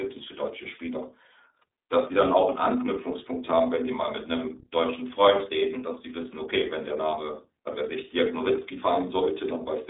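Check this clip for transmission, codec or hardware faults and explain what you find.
One fault runs through the whole clip: iLBC codec coding. The speech is confined to a narrow telephone band, roughly 300 Hz to 3.7 kHz, with nothing above 3.8 kHz. The codec models each block of speech on its own, here consistent with 30 ms frames and the 13.33 kbps mode, rather than building on the previous one. The codec damage is plainly audible: the speech sounds muffled and thin, with a rough, slightly synthetic texture.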